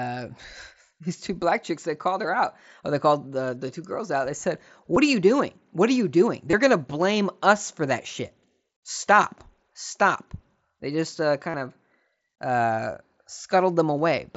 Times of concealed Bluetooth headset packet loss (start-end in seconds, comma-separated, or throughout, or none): 4.94-4.96, 6.51-6.53, 11.50-11.54